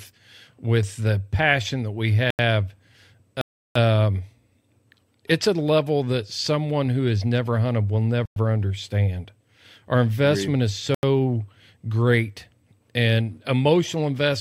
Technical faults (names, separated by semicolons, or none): block of digital silence